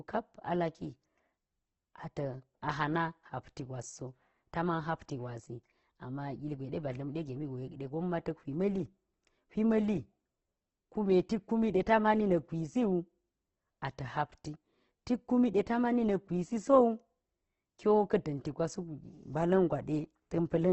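Throughout the speech, the encoder has likely squeezed the audio through Opus compression at a very low bitrate, in the region of 12 kbps, in its music-style CELT mode with the bandwidth narrowed to wideband. Nothing remains above 8.2 kHz, so the top end is dull. With so few bits, band energies are kept but their fine detail is filled in coarsely, leaving the sound heavily damaged: grainy, rough and noisy rather than swirling.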